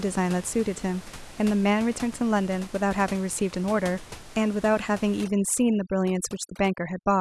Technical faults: overdone noise removal

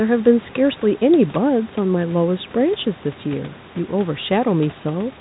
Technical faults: none

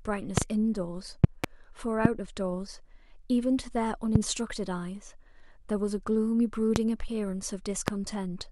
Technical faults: loud pop

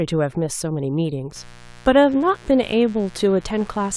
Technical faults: mains buzz

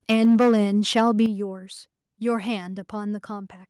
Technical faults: microphone overload; microphone volume stepped down

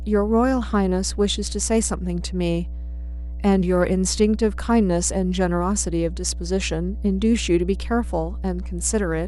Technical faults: mains hum

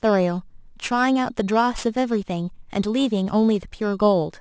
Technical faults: aliasing

